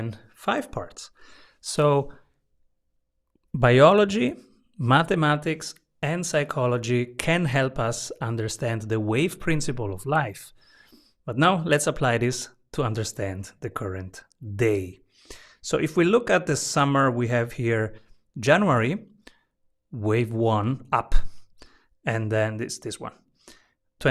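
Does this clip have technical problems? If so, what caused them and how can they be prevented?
Yes. A resampler restarted on every block runs through the whole clip. The speech was converted from 48 kHz to 44.1 kHz in separate 50 ms chunks. Each chunk was treated as if nothing came before or after it. So the filter saw wrong samples at every edge. That leaves a small error every 50 ms. It is heard as a steady tick, or buzz, at 20 Hz. It rides on the speech and drops away in pauses. To prevent it, keep one resampler running across the whole stream so its filter history carries from block to block.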